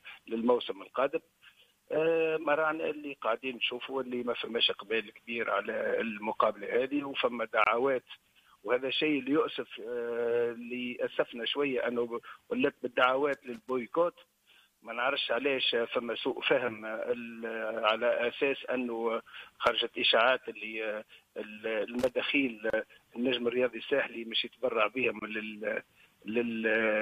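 The audio has two kinds of technical fault. There are three gaps at joins of encoded pieces: brief silences at 7.64 s (about 26 ms), 22.70 s (about 34 ms) and 25.19 s (about 25 ms). Each one cuts into continuous sound with edges that are smeared by the codec, and the sound then carries on exactly where it stopped. That continuation separates this from a dropout, where part of the sound is lost. The cause is that sections were encoded separately and joined without trimming, so each encoder's start-up delay and last-frame padding stayed in as silence. There are also two bursts of loose connector crackle, from 13.33 to 13.70 s and from 21.97 to 22.10 s. They are irregular scratchy clusters rather than single clicks or clean silences, because a worn or dirty contact making and breaking rapidly chops the signal. That ragged, uneven texture distinguishes them from the codec gaps.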